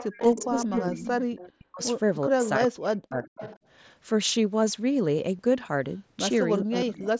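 From 0.0 to 1.52 s a faint, delayed copy of the speech trails about 0.41 s behind, roughly 15 dB down. This is an echo leak, likely a loudspeaker echo the far-side canceller failed to remove.

Overlapping it, from 0.06 to 1.82 s, the speech dips and cuts out in pieces, by as much as about 40 dB and for around a second in total. This is speech suppressed in double talk, likely the canceller turning down both talkers at once.

The same pattern returns with double-talk suppression from 2.27 to 3.42 s, about 0.7 s affected in all. Within and just after it, brief echo scraps sit at 2.44 to 2.49 s and from 3.24 to 3.59 s.

At 5.37 s a short glitch marks concealed Bluetooth headset packet loss. About 15 ms of audio went missing between headset and phone, which fits a couple of lost frames, and the gap was filled by repeating recent waveform.

From 6.62 s to the end the speech is suppressed in double talk again, around half a second affected. 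A brief echo leak sits at 6.80 to 6.85 s.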